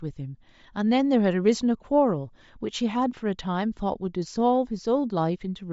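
A speech clip with a breathy, grainy edge from start to finish. The damage is plain. The likely cause is Bluetooth LC3 compression. This codec discards much of the upper spectrum and fills it with noise. The sound fits a 32 kbps stream in 10 ms frames.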